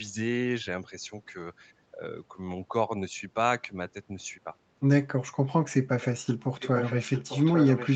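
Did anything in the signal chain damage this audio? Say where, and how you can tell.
Yes. At the call-processing stage, the speech dips by about 10 dB for roughly 100 ms, from 1.92 to 2.02 s, likely speech suppressed in double talk, as the echo canceller turned the signal down. Unlike a network dropout, the sound is attenuated rather than silenced or replaced.

From 6.6 s to the end, a second copy of the speech trails the original by 847 ms, about 10 dB quieter. This is likely an echo leak, where a loudspeaker's echo canceller let part of the signal back through. A room reflection would arrive within milliseconds, not nearly a second later.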